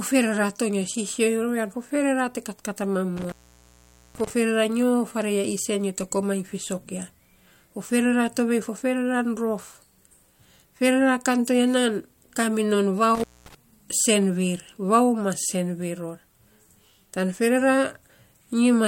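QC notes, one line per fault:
3.17–4.30 s and 13.15–13.55 s, intermittent contact: a loose cable or plug opening briefly, so the speech drops out for about 0.83 s right after "te katkat a mam", then about 0.23 s later on, with crackle at each break and faint hiss in the gaps.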